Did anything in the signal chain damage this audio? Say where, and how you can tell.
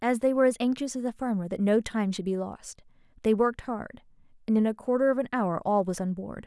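No, nothing in the signal chain damaged this audio.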